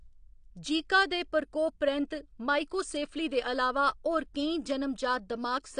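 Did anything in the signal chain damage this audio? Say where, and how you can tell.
Yes. The codec stage is the likely culprit: the speech sounds as though it passed through AAC compression, most plausibly AAC-LC. Nothing reaches above about 9.8 kHz, so the top of the spectrum is simply missing and the voice sounds dull, with plainly audible smearing and a watery texture on sustained sounds and sibilants. That combination fits a low bitrate around 32 kbps, where the encoder trims bandwidth and starves the remaining bands of bits.

The same transform coding leaves a pre-echo at 2.70 s. A sharp onset there is preceded by a brief hiss spread over about 17 ms. The codec spreads quantisation noise across the whole block, sizing it for the loud attack, so the noise also fills the quiet stretch before the attack lands. The onset comes across softened and blurred rather than crisp.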